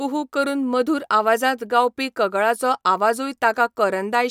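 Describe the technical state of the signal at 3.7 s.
At 3.7 s the speech signal is intact, with no technical fault audible at that moment.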